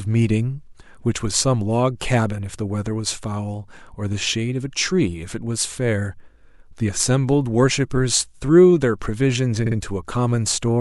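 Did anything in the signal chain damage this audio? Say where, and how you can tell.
Yes. At the codec or storage stage, repeated frames damage the speech from 9.66 to 9.76 s. A 52.2 ms slice of compressed audio plays twice more, giving a brief stutter and stretching the clip by about 105 ms, which fits two frames being rewritten or resent. On a spectrogram the same short pattern appears side by side in copies. The waveform shows identical segments butted together.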